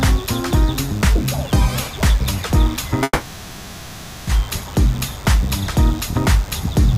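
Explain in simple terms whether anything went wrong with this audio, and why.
A thin, steady buzz sits under the whole clip. This is DECT cordless phone buzz, caused by a nearby cordless phone sending short radio bursts 100 times a second.

From 3.03 to 4.29 s the audio stalls into a fading hum, then resumes where it stopped with nothing lost. This call audio freeze likely happened because delayed network packets left the receiver waiting.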